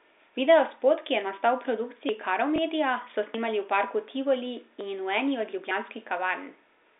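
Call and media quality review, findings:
Dropped buffer (overrun), four events. Jump forward in the speech, no gap of silence. 2.09 s, right after "ki je nastal v", around 70 ms skipped. 3.34 s, just before "v parku", around 50 ms gone. 4.81 s and 5.71 s (after "eni od"), each a short skip of roughly 20 ms. Likely component is the capture path. The application read its buffer too late, the hardware overwrote it, and the surrounding audio was spliced edge to edge.

Packet loss with last packet repeated, 2.56 to 2.58 s. Small blip. One 20 ms packet missing. The receiver's concealment replayed the previous packet in its place. This is a single packet, too short to build into a sustained buzz. It is heard on top of the narrow 300 Hz to 3.7 kHz band of the G.711 A-law line.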